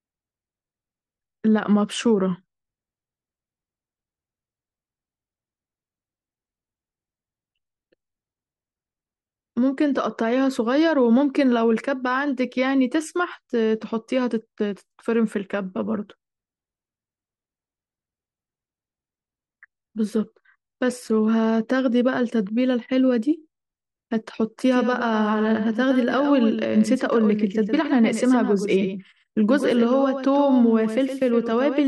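At 24.71 s a doubled audio track begins and runs to the end. A second copy of the speech trails roughly a tenth of a second behind, about 10 dB quieter, and it cuts in abruptly. It likely comes from a slower second capture path.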